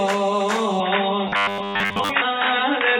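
From 0.8 s to the end, the audio abruptly turns dull and boxy, and a new hiss appears well below the signal, roughly 35 dB down. There is no gap at the change and the loudness barely moves. This is most likely an input switched to a poorer device, such as a second microphone or a headset's narrowband call profile, whose limited bandwidth and own noise floor replace the original pickup. Inside that stretch, from 1.27 s to 2.09 s, the sound becomes a rigid metallic buzz locked at 100 Hz that only loosely tracks the underlying audio. That is robotic sound from repeated short buffers. When fresh audio arrives too late, the same slice of about 10 ms is likely being looped to fill the gap, so most of that passage is repeated material rather than new signal. The repetition rate becomes the fixed buzz pitch.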